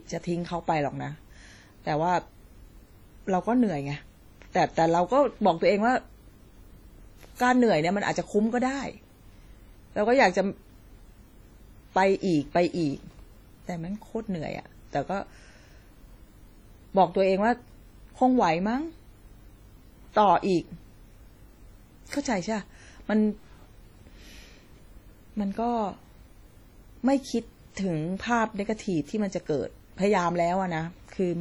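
Throughout the speech, a low-bitrate source saved at a high bitrate: the audio carries the swirly, smeared texture of heavy compression, most likely from a 32 kbit/s WMA file later re-encoded as 320 kbit/s MP3. The second pass cannot restore detail discarded the first time. On a spectrogram, the upper bands look patchy and blocky rather than continuous, even though energy reaches 20.1 kHz before the clean cut-off. The waveform looks ordinary.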